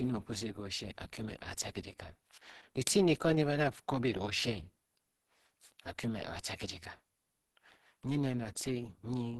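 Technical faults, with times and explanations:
Throughout: Opus compression. The speech sounds muffled and hoarse, with a rough, grainy texture where finer detail should be, and nothing reaches above 12 kHz. This damage is plainly audible across the clip. It is likely the result of Opus encoding at a low rate, with the encoder running in its hybrid speech mode and a super-wideband limit, which fits a bitrate of around 16 kbps. It keeps the broad shape of each band but fills in the finer detail coarsely.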